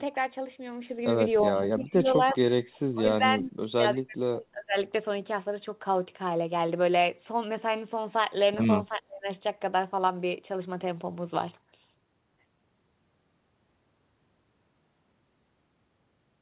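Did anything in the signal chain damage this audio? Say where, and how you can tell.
Yes. The damage happens at the call-processing stage. The speech ducks three times: from 1.48 to 2.4 s by roughly 15 dB, from 2.93 to 4.77 s by around 25 dB, and from 8.88 to 9.28 s by roughly 30 dB. This is likely speech suppressed in double talk, where the echo canceller, unable to separate near speech from far-end echo, turns the talker down. It differs from packet loss because the speech is turned down rather than replaced with synthetic fill. The steady 4 kHz ceiling fits a narrowband G.711 call and is not part of this fault.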